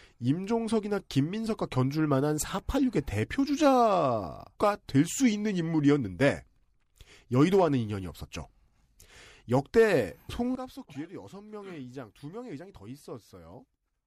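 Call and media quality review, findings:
Sudden gain jump at 10.55 s, level drops about 15 dB to end. Speech and noise floor fall together. Likely cause: digital gain step applied without ramp.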